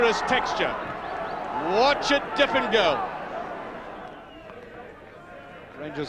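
No technical faults can be heard anywhere in the clip. Nothing in the audio calls for a timestamp or a correction.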